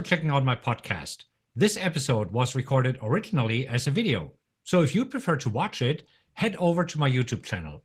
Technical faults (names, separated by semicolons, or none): Opus voice compression